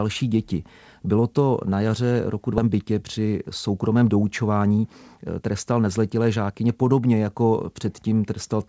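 Skip ahead, at 2.58 to 2.60 s: roughly a second and a half of the speech was dropped while later audio was already queued. Playback jumps straight across with no filler, so the sound on either side of the cut is joined almost directly.

Jitter buffer speed-up, from 2.67 to 7.14 s: with too much audio held after the jump, the receiver repeatedly removed short pitch-period pieces, about 0.4 s in total. Speech runs at about 109% speed at unchanged pitch and sounds hurried. Throughout, the call codec leaves nothing above 8 kHz, which fits G.722.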